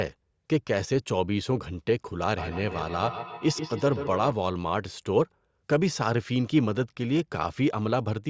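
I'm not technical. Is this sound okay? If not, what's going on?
No. Feedback echo between two devices, 2.38 to 4.39 s: two nearby devices on one call pass the speech back and forth, repeating it roughly every sixth of a second.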